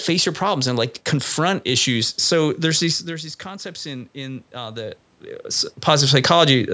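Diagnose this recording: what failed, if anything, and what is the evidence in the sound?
The one thing that misbehaves is automatic gain rising in the call processing. Around 3 s the level at the mic drops by roughly 13 dB, which sounds like the talker leaning back. From 3.07 s to 5.76 s the AGC slowly winds its gain up by about 5 dB to compensate. You can hear the voice and the room noise swell together over those two-plus seconds. The talker moves again near 5.5 s.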